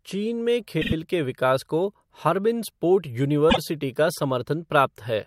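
Around 0.81 to 0.93 s the speech stutters: a 48 ms chunk plays three times in a row, adding about 96 ms. That's repeated frames, where the same compressed block got sent again. At 3.49 to 3.58 s another 48 ms chunk repeats once.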